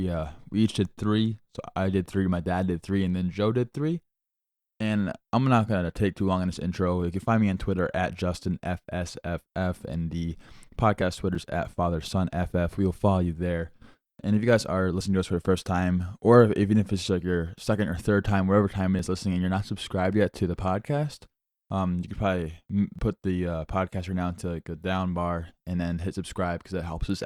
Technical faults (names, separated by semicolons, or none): overlap between stream segments